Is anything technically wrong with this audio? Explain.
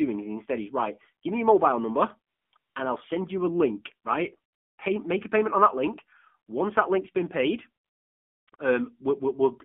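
Yes, two faults are audible in this speech clip.

AMR narrowband mobile codec, throughout: the speech has been squeezed through a narrowband mobile speech coder that rebuilds each short frame from a vocal-tract filter and a few excitation pulses. Only about 200 Hz to 3.4 kHz survives, so the sound is thin and muffled, and the low bit budget, which fits the 7.4 kbps mode, makes the voice plainly buzzy and synthetic.

AMR comfort noise, at 2.34–2.52 s, 2.58–2.76 s, 4.52–4.78 s, 7.84–8.48 s, and briefly at 8.50 s and 8.56 s: the phone judged the talker silent and stopped sending speech frames for 180, 180, 260 and 640 ms, then 20 ms twice. The receiver filled each gap with generated noise built from a coarse level and spectrum estimate. The real background gives way to a smooth, steady hiss that switches in and out abruptly.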